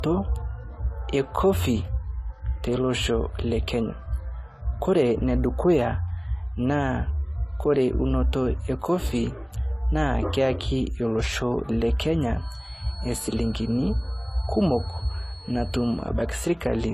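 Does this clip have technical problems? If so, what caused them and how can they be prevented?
Yes. The speech was likely encoded with a lossy codec and then re-encoded with a second one. The artefacts point to an MP3 pass at around 58 kbit/s followed by AAC-LC at around 32 kbit/s. The second encoder had to spend its small bit budget reproducing the first encoder's damage while adding its own artefacts, so both kinds of transcoding artefact are heard together throughout. Nothing remains above 14.1 kHz, the lowest cut-off in the chain. To prevent this, keep an uncompressed or lossless master and encode only once, from that master, at an adequate bitrate.

From 12.33 s to 16.12 s, the loudspeaker-to-microphone loop was likely sitting just at the edge of feedback. The system had just enough gain at one frequency to keep it ringing without letting it grow. The result is a feedback whistle, a thin steady tone near 4.4 kHz behind the speech at about 20 dB below it, swelling and fading slowly in level. 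To prevent it, reduce monitor or loudspeaker gain, reposition the microphone away from the speakers, or notch out the ringing frequency.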